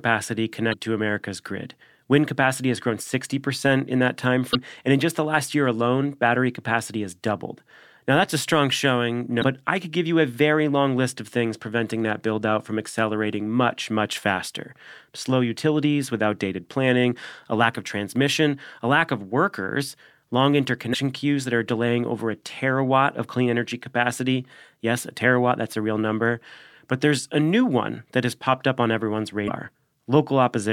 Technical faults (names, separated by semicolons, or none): damaged data in a compressed stream